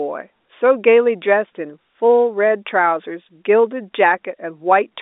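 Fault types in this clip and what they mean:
Nothing's actually wrong in this speech clip; it just has the narrow sound of an ordinary phone line, with nothing coming through above about 3.8 kHz.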